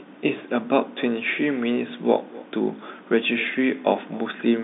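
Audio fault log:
Throughout: echo with no canceller. Each phrase returns about 22 dB quieter roughly a third of a second later, a thinner copy picked up by the far loudspeaker and microphone and sent back unremoved, heard over the narrow telephone band. On a waveform, faint repeats trail every burst; a spectrogram shows ghosted, delayed copies of each harmonic pattern.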